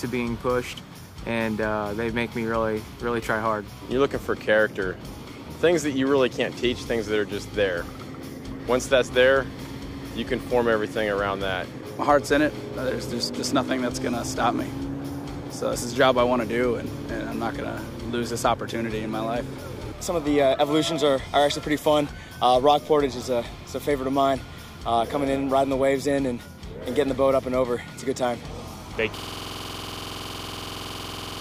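At 29.18 s the audio falls into a system hang loop that runs to the end of the clip. The system stopped supplying new audio while the output hardware kept replaying its ring buffer, so one 46.44 ms slice repeats several dozen times. That length fits a 2048-sample buffer. The 21.5 Hz repeat rate gives a harsh, rattling buzz. On a waveform, identical blocks tile edge to edge. A spectrogram shows evenly spaced vertical stripes and a comb of harmonics at multiples of 21.5 Hz.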